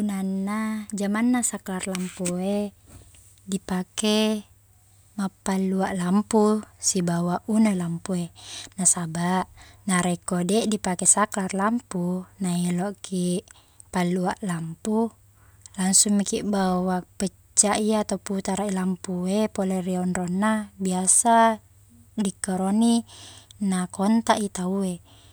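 Speech recording, no technical faults detected anywhere in the clip.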